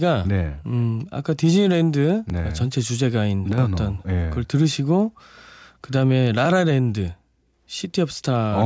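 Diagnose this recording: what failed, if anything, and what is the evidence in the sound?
Small skips ahead at 2.30 s and 6.45 s are likely a dropped buffer (overrun) in the driver, with roughly 5 ms lost each time.

From 3.53 to 3.58 s and 7.85 to 7.90 s, the level briefly sags about 6 dB. That's likely one channel dropping out before the mono sum, somewhere in the wiring or converter.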